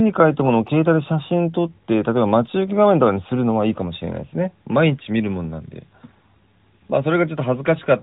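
The speech in this clip has no technical fault to report. It comes through an AMR narrowband mobile codec at 12.2 kbps, so nothing above 4 kHz is present, and the codec leaves only a light trace on the sound.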